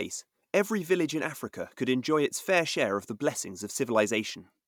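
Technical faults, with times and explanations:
Nothing here to flag, just the recording doing its job with no technical trouble to point at.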